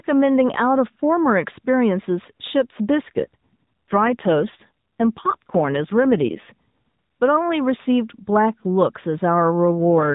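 An AMR rate drop runs from 3.24 to 6.49 s in this speech recording and returns at 9.80 s, lasting to the end. In both stretches the voice turns rougher and more synthetic without any gap or change of band, which points to the link forcing the codec down from about 12.2 to 5.9 kbps and spending the freed bits on error protection. The band stays capped at 4 kHz throughout, as narrowband AMR requires.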